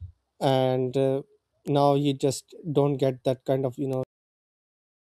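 Bit error spikes at 0.50 s, just before "uh now you just", at 1.68 s, and at 3.93 s, after "that kind of you", break into this speech clip. Each is a single corrupted sample, a flipped bit that throws the value by a power of two before it snaps back, heard as one sharp broadband tick unrelated to the speech. A cut-off end follows at 4.03 s, shortly after "that kind of you": the final buffers were never written or played, so the sound stops abruptly mid-utterance and falls straight into digital silence with no natural decay.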